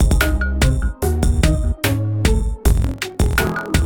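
From 2.61 s to the end there's a block size mismatch: block tails get dropped, so a 43 Hz buzz appears and the audio runs 1.12 times fast, fitting 1024-sample reads.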